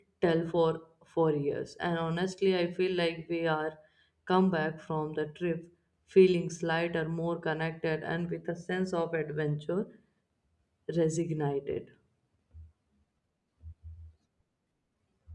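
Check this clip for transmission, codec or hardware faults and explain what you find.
No transmission or hardware faults.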